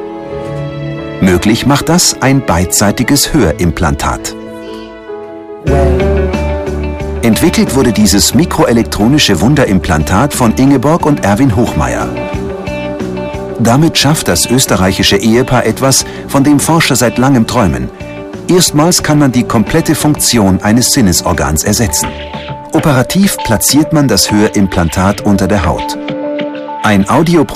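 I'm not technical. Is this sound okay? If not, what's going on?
No. From start to finish the loudest moments are hit by hard clipping: the sound is pushed louder than the recording chain can carry, so the tops of its biggest swings are sliced off flat. Only a small share of the audio goes over, but each peak comes out crackly rather than just loud. Unlike the gentle, warm thickening of mild saturation, this is a gritty crackle that appears exactly on peaks and disappears in quieter passages.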